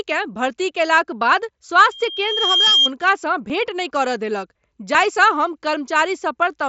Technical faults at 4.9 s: dropped buffer (overrun)

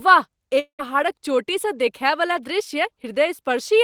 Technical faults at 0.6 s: long network dropout

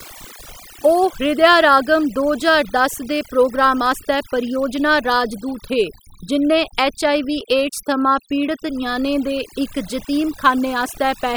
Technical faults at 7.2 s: overdone noise removal

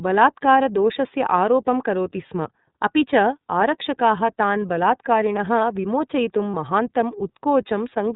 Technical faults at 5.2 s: iLBC codec

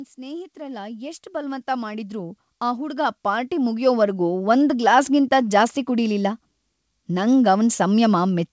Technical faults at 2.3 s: automatic gain rising

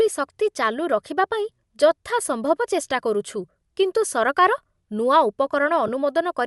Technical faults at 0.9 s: Bluetooth LC3 compression

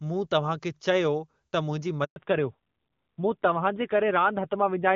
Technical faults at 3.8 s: fallback to narrowband

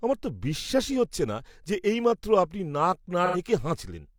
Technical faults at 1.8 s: none

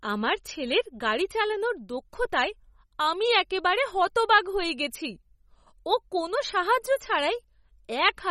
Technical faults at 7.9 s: MP3 compression

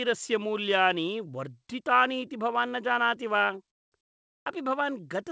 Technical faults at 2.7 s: none

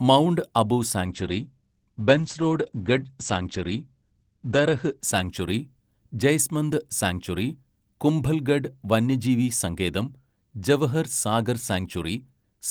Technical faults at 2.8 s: call bitrate drop

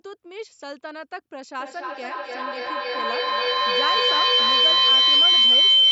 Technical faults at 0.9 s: none

